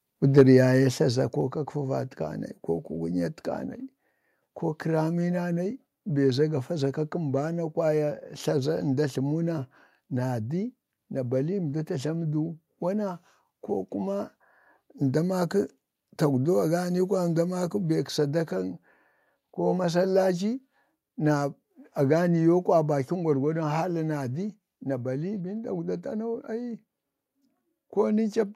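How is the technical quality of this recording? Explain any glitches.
The recording has two related problems: a brief overload at the very start and three sudden drops in input level.

Microphone overload, 0.38 to 0.43 s: the input gain was likely set too high, so the loudest peaks ran past the converter's ceiling by about 3 dB and their tops were flattened. Around a tenth of the samples in that short stretch are cut off. You hear this as a harsh, crackling edge on the loudest part of the speech.

Microphone volume stepped down, at 0.41, 1.41 and 23.07 s: the call software likely detected the hot, clipping input and lowered the microphone's gain in single steps of about 2 dB, then about 3 dB, then about 2 dB. Each step makes the speech and the background noise drop together, abruptly and without a fade. The first step comes in the middle of the distorted peak.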